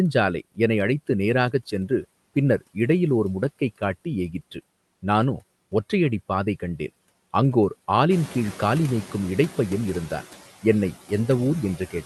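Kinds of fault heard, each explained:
noise suppressor artifacts: Throughout the speech, a suppressor pulls the steady background down by about 16 dB, working band by band on short frames. The noise drops away between words and comes back up under them. This happens all the time as speech starts and stops. It does not follow any change in the room's noise level, which is what sets it apart from the lag below.
noise suppressor catching up: Around 8.0 s, just after "ஒற்றை அடிப்பாதை கண்டேன் அங்கோர்", the room noise jumps by about 13 dB. The suppressor's noise estimate still reflects the quieter room, so from 8.1 s the louder noise comes through with only about 5 dB of reduction. Over about 1.03 s the estimate adapts and the noise sinks, settling by 9.13 s, before "இடைப்பையன் இருந்தான் என்னை". Unlike the constant pumping, this is a single swell that fades away once.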